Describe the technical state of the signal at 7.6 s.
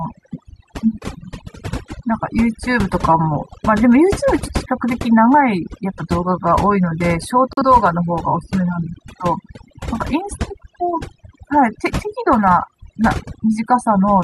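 At 7.6 s the signal is inside a digital broadcast dropout running from 7.53 to 7.63 s. The receiver stopped getting decodable frames and muted until valid data returned, leaving a clean hole of near silence. Its brevity fits a single lost frame. Unlike a tape dropout, the level doesn't sag or waver; the audio simply vanishes, and nothing is smeared or repeated over the gap.

Underneath, overdone noise removal is present here as everywhere in this speech. Bands judged close to the noise floor are pushed down hard, so the background becomes near silence flecked with twinkling specks. Those isolated specks distinguish it from the smeared, swirly artefacts of low-bitrate coding.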